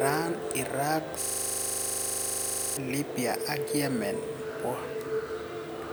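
A rapid, rattling buzz takes over the speech from 1.22 s to 2.77 s: the same 40 ms fragment repeats exactly, 39 times in a row, at 25 Hz, so the sound freezes into a harsh, mechanical drone before normal speech resumes. This is a system hang loop. The computer or audio driver stalled, but the sound hardware kept replaying the last contents of its ring buffer, which points to a buffer roughly 40 ms long cycling unattended until the system recovered.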